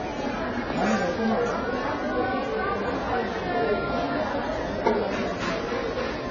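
From start to finish the sound is dull and smeared, with nothing above 7 kHz and a fizzy, warbling texture. This is heavy AAC compression, likely AAC-LC at a rate near 16 kbps. A spectrogram shows a hard ceiling at 7 kHz.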